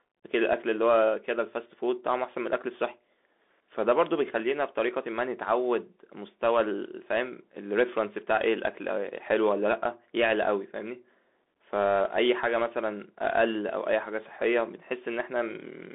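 Speech, carried throughout by a Bluetooth CVSD headset codec. The band runs from about 250 Hz to 3.6 kHz, and nothing survives above 3.8 kHz. That gives the thin, boxed-in headset sound. The codec damage is plainly audible. CVSD sends one bit per sample, just up or down, with a step size that adapts. This fits a 64 kbps link. Loud high sounds outrun the step and distort. S sounds turn scratchy. A granular hiss sits underneath.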